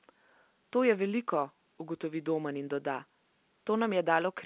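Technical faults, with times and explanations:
Nothing stood out on listening to this telephone-band speech recording.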